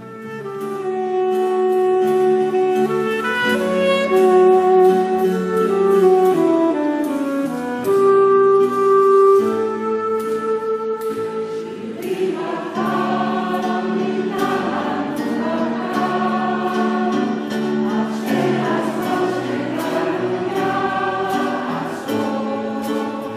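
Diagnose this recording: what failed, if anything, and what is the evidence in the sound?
Nothing stood out on listening that would point to a failure at any stage of the chain.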